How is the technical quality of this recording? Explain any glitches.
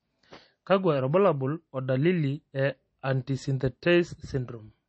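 The quality is compromised by clearly audible lossy coding throughout, most likely MP3 compression at a low bitrate, around 32 kbps. With too few bits, the encoder removes everything above 8.3 kHz and drops weak frequency lines frame by frame, making the speech sound watery and swirly with smeared consonants. A spectrogram shows a hard flat ceiling at 8.3 kHz and speckled, flickering holes below it.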